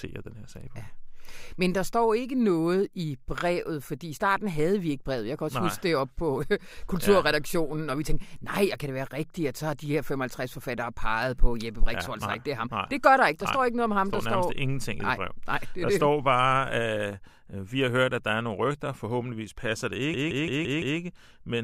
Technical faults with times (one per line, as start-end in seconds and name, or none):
20.14-20.99 system hang loop